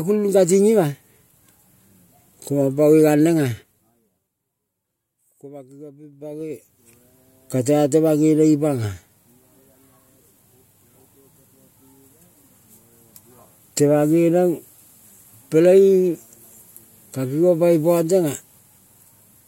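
A speech recording with zipper noise in two places. From 3.44 to 4.37 s the level drops by roughly 20 dB in 2 dB steps, about ten a second. From 6.04 to 6.97 s it climbs back the same way. Each unsmoothed step clicks, so a ticking rides on the speech.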